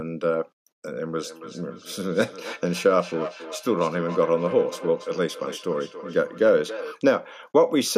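From 1.2 to 7.0 s there's feedback echo between two devices: a second device replays the speech into the mic, returning roughly every 300 ms, peaking about 13 dB below.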